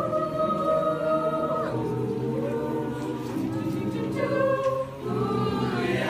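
No technical faults can be heard anywhere in this clip.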